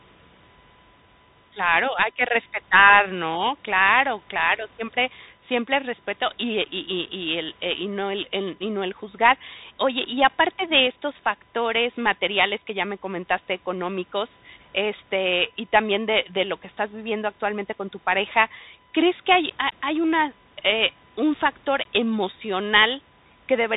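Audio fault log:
throughout, USB whine: a steady 1 kHz tone sits roughly 40 dB below the speech; its fixed pitch at the USB frame rate sets it apart from 50 or 60 Hz mains hum.
throughout, Bluetooth CVSD headset codec: nothing passes above 3.8 kHz, with plainly audible grainy hiss and scratchy s sounds, which fits one-bit 64 kbps delta coding rather than a simple low-pass filter.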